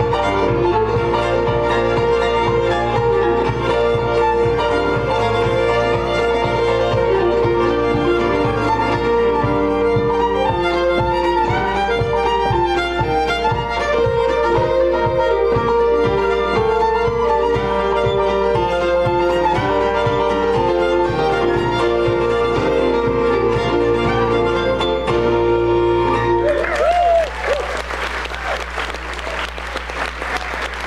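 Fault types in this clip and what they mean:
Mains hum: Power-line current is leaking into the signal path, most plausibly through a ground loop or from a transformer sitting close to the wiring, so the 60 Hz supply frequency rides along with the audio. It comes through as a steady low drone at 60 Hz, with some low harmonics, running for the whole clip without fading or changing pitch. It sits only around 15 dB below the wanted signal, loud enough to hear under everything.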